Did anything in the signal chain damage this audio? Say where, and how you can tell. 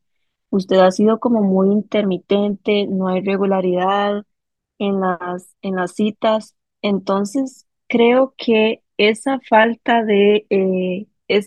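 No, nothing in the signal chain damaged this audio.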